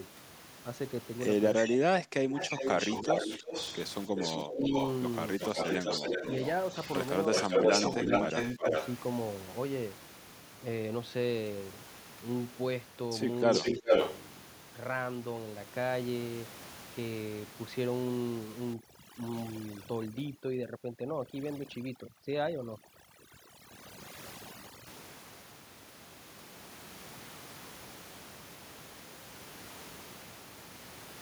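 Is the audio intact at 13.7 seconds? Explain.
No. From 13.51 to 14.17 s a delayed copy of the speech, trailing by about 0.4 s and about 5 dB louder than the speech, sounds over it. This is likely an echo leak: the far end's echo canceller let loudspeaker sound picked up by its microphone pass back.

Between 13.6 and 13.92 s, the speech itself dips in patches totalling about a fifth of a second, at worst by around 15 dB. This is speech suppressed in double talk, likely from the canceller turning down the talker along with the echo while both sides sounded at once.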